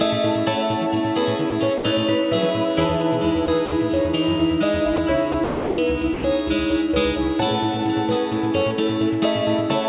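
Short gaps fill with steady noise at 1.50–1.52, 1.78–1.84, 3.46–3.48, 3.66–3.72, 4.96–4.98, 5.32–5.34, 5.44–5.78 and 6.14–6.24 s. This is likely sound dropped by the voice detector, replaced by comfort noise. The longest gap lasts 340 ms. Through the narrowband call path, nothing is heard above 4 kHz.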